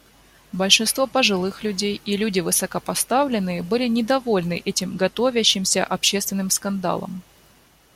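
No technical faults can be heard anywhere in this speech recording.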